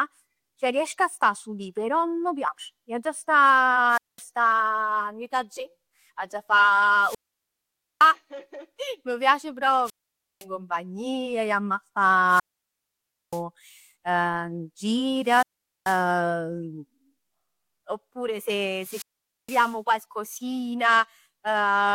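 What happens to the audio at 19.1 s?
A wireless microphone squelch dropout runs from 18.75 to 19.78 s: the fading radio signal brings up hiss, then the receiver mutes for about 467 ms, unlike an abrupt digital gap.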